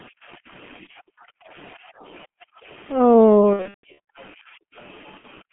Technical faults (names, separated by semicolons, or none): G.723.1 codec; VoIP packet loss concealed by the speech codec